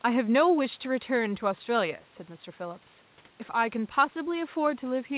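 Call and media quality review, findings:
Speech sits about 33 dB above a room-noise floor, with no content above 4 kHz, consistent with a narrowband G.711 A-law call path working as designed.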